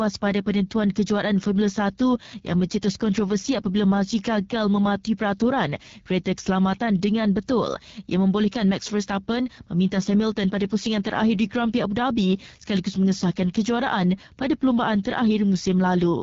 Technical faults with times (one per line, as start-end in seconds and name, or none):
0.00-16.23 AMR wideband (HD Voice) codec